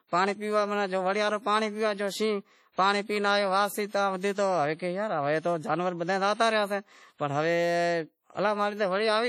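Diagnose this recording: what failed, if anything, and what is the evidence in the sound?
The codec stage failed. The speech has likely been through heavy WMA compression, and the damage fits an early WMA encoder running at a low bitrate of around 32 kbps. Its long transform blocks smear quantisation noise over tens of milliseconds, and weak spectral detail is discarded outright. The result is a ringing, washy sound with a hiss that swells and fades along with the speech, and it is present for the whole recording.

The same codec also produces pre-echo at 2.72 to 2.78 s, just before "پانڑی پی". A sharp onset landed late in a transform block, so the noise budget set for that loud attack also spread into the quiet moment before it. You hear about 53 ms of hiss running ahead of the attack, and the onset itself comes through softened and smeared instead of crisp.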